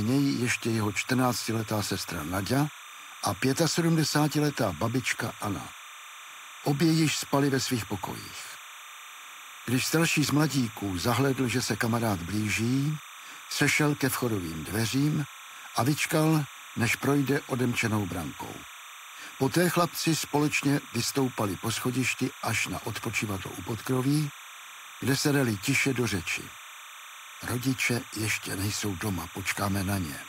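Timecode bleed runs throughout: 30-frame linear timecode leaking in, a chirping warble around 1 and 2 kHz, roughly 20 dB down, showing as steady horizontal spectrogram bands.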